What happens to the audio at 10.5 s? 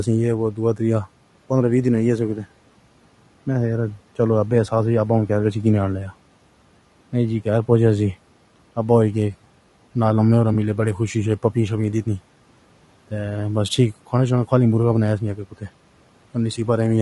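From 10.53 to 10.56 s a 20 ms AAC frame is lost and concealed. The decoder fills the gap from the previous spectrum, giving a brief smeared, noisy blip that shows as a blurred vertical smudge on a spectrogram. Across that moment the sound is also rough and grainy, with noise between the harmonics and a thin top band, likely from low-delay AAC compression around 32 kbps.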